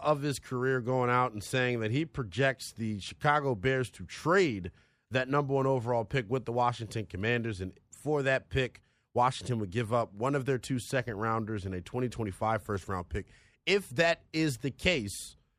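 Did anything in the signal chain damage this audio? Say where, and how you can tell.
No, nothing in the chain damaged it.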